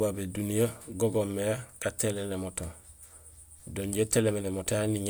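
No technical faults are audible.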